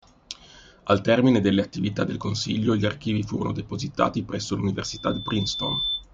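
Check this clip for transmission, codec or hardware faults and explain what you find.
One hardware fault is present: loudspeaker feedback squeal from 4.84 to 6.04 s, starting right after "archivi furono depositati presso". A microphone is picking up the loudspeaker it feeds, and at 3.5 kHz the loop gain passes one, so that frequency reinforces itself. A single pure tone swells over about a second until it is roughly as loud as the speech. Unlike a steady interference whistle, it grows from nothing rather than appearing at full level.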